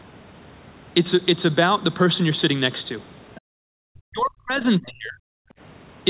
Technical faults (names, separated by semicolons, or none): other side's voice leaking through; background gated by the echo canceller; speech suppressed in double talk